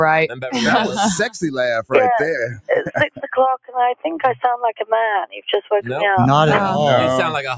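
A speech-tuned noise suppressor has been left running on non-speech audio, which has come through a call's microphone chain with nothing above 8 kHz. The suppressor keeps mistaking sustained material and tails for noise, so the level pumps up and down by roughly 10 dB and held sound sinks while attacks survive. It clamps down hardest in four spots where the sound is cut by the noise suppressor: 0.28 to 0.5 s, dropping about 11 dB, then 2.51 to 2.7 s, 2.87 to 3.3 s and 5.27 to 5.72 s, each sinking about 20 dB.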